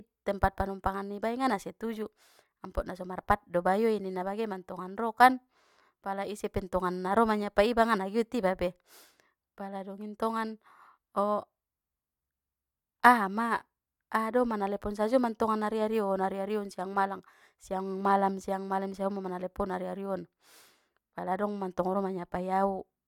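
Nothing in this speech recording stands out as a technical fault; there's no glitch, dropout or other problem to point to anywhere along the way.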